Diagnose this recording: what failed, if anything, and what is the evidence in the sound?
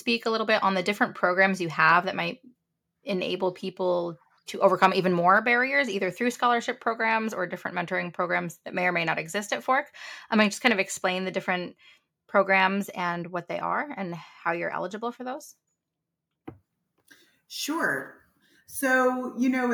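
At the converter stage, a harsh, crackling edge appears on a loud syllable in this speech between 4.83 and 4.86 s. This is likely microphone overload: the peaks ran about 4 dB past full scale and were cut off. The waveform shows flattened tops, and the spectrogram shows a brief broadband smear.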